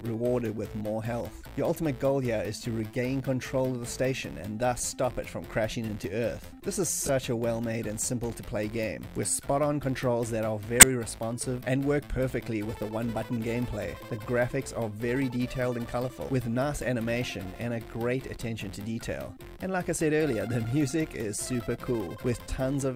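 A corrupt frame decoded at 7.00 to 7.09 s and again at 10.80 to 10.86 s puts brief chirpy noise bursts into the audio, peaking near -15 dBFS and then near -5 dBFS. Damaged bits in a few compressed frames were decoded anyway, misplacing energy in frequency.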